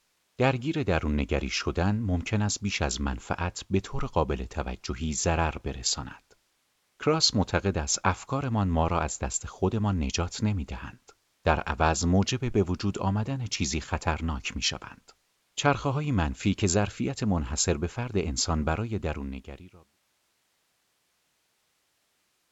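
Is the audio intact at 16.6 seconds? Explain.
Yes, the audio is intact at 16.6 seconds, with no dropout, distortion or other fault at that moment.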